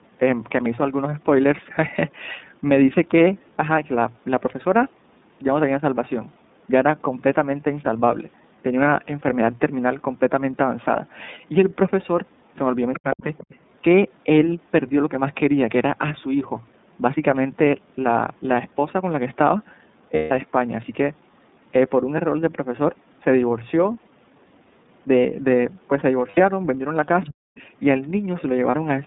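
Throughout, the speech carries iLBC codec damage that is plainly audible: a slightly rough, synthetic edge and a band limited to about 150 Hz to 3.7 kHz. On a spectrogram, energy stops sharply at 3.7 kHz with nothing above it, and faint 30 ms block structure shows in the fine detail. That fits iLBC's 30 ms frame mode, at around 13 kbps, coding each frame's excitation independently.

From 12.93 to 13.55 s, a second voice comes through at about 15 dB below the main speech. This is the other side's voice leaking through, most likely loudspeaker echo that the echo canceller failed to remove. On a spectrogram it appears as faint, separate harmonic traces laid over the main voice.

Overlapping this, from 12.99 to 13.28 s, the main speech is suppressed in double talk. It dips hard, by around 40 dB at its deepest, in pieces adding up to roughly 150 ms. The canceller, likely unable to separate talker from echo, turned both down. 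The waveform shows the envelope collapsing in notches.

At 20.16 to 20.32 s, lost iLBC frames leave a 150 ms held, buzzy vowel, which fits five 30 ms frames. The decoder repeats the last pitch cycle mixed with noise, fading as the gap lengthens. A spectrogram shows flat, smeared harmonics with no movement. Normal speech returns almost at once. Shorter losses occur at 26.31 to 26.38 s (60 ms) and 28.71 to 28.75 s (30 ms).

Near the end, the same pattern recurs. Leaked voice appears at 27.22 to 27.29 s at about 15 dB down. Double-talk suppression follows from 27.28 to 27.45 s, with drops of around 40 dB totalling roughly 150 ms. A fainter scrap of leaked voice, about 30 dB down, appears at 27.56 to 27.62 s.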